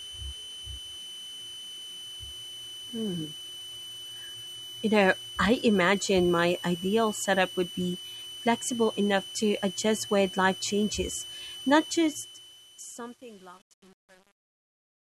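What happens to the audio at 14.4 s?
The fade-out stage is keeping only about 8 bits with no dither, so from 11.90 s to the end at 15.19 s the tail of the fade is hit by truncation distortion. By 14.4 s the level sits near the smallest steps, and the waveform collapses into coarse square steps that sound gritty.

Underneath, a switching power supply is whistling audibly throughout the clip. The switching supply whistle sits around 3 kHz, wandering between about 2.98 and 3.04 kHz, roughly 15 dB below the signal.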